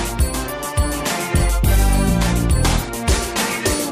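No technical faults can be heard anywhere in the clip, so there is nothing to place in time order.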